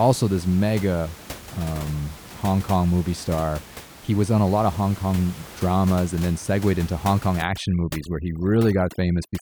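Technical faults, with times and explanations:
7.42 to 9.42 s, overdone noise removal: in the last two seconds the room noise, which sits about 18 dB below the speech, is pushed down too hard by a noise reduction stage. Frequency bands that come close to its noise estimate are cut almost to nothing, and the softer parts of the voice fall into those bands too. The background drops and breaks up into small twinkling specks.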